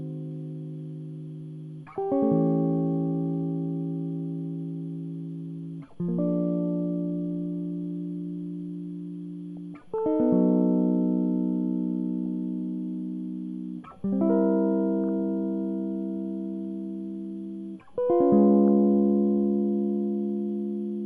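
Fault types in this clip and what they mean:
MP2 compression: the music sounds dull throughout, with a gurgling, grainy texture as upper bands drop out and what remains is coarsely quantised. It's plainly audible and most likely MPEG Layer II squeezed hard, something in the region of 80 kbps.
DAB burbling: reception errors slipping into the MP2 stream put short blips of noise into single sub-bands. You hear it around 9.57 to 9.99 s, briefly at 12.26 s, then 15.03 to 15.19 s and 18.65 to 18.77 s.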